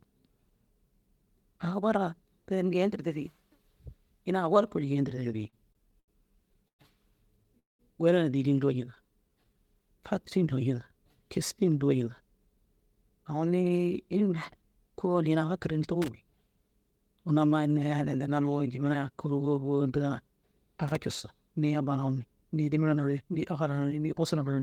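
Speech, and the network side is having a rough time in the first half while the hardware acts up later. From 5.23 to 6.81 s there's repeated stalls (stutter): eleven separate hiccups where the playout ran dry and the receiver held on to the last bit of sound until more arrived. Together they fill about 313 ms, roughly a fifth of that stretch, and the longest single hold is 109 ms. Nothing actually goes missing, but the speech drags and stumbles, which points to packets trickling in late or slower than they were being played out. Right after, from 7.43 to 7.47 s, there's a short stall from a late packet. One packet wasn't there on time, so the last sound gets stretched by about 20 ms before playback carries on from the same spot. It's brief, heard as a slightly held sound with a faint buzzy dip, and it adds that 20 ms to the delay. Then from 7.59 to 7.81 s the audio simply stops for 200 ms, with about 180 ms of it dead silent, and resumes exactly where it left off. 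That's a call audio freeze, likely caused by packets getting held up in transit until the jitter buffer emptied out, so a gap was pushed into the stream rather than anything being lost. From 9.03 to 9.99 s a jitter buffer slow-down kicks in. The receiver is padding out its reserve by repeating single pitch periods and bits of pauses over and over, adding about 83 ms. The speech runs at about 92% speed with the pitch unchanged, so sounds feel drawn out. The opposite happens from 11.98 to 15.44 s with a jitter buffer speed-up. Once the backlog piles up, the receiver trims short slices of one or a few pitch periods at a time to bring the delay back down, shaving off roughly a third of a second in total. Playback runs at about 108% with the pitch held steady, and it comes across a bit hurried. Finally there's loose connector crackle at 16.02 to 16.08 s and again at 20.88 to 20.96 s. These are short, irregular bursts of scratchy crackle, the kind you get from a worn or dirty contact making and breaking as it moves. 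That chops the signal up in tiny fragments, and any DC on the line turns into little pops. This one is physical, not network, so it's worth checking the cable and jack.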